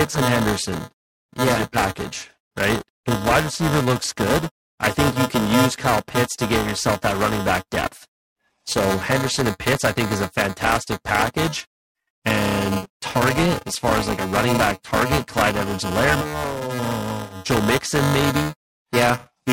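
A robotic 375 Hz buzz runs throughout: buffer tearing, which fits a 128-sample buffer, each one splicing in a short slice about 5 ms old.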